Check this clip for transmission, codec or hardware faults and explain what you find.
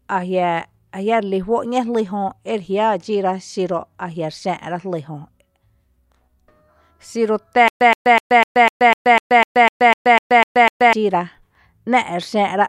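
One fault: a stutter with silent gaps from 7.68 to 10.93 s. A 122 ms burst of speech repeats 13 times, each followed by 128 ms of dead silence, every 250 ms. The likely cause is a stalled stream replaying its last fragment. The speech in that span is lost.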